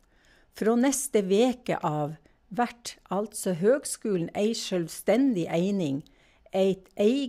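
At 0.66 s, just before "neste veke", there's a bit error spike: a single sharp tick, lasting two samples, that peaks around -27 dBFS. A flipped bit threw the sample value off by a power of two, then it snapped straight back. Another one lands at 5.15 s, a single sample this time and a bit louder, about -21 dBFS. Both are broadband clicks that have nothing to do with the speech around them.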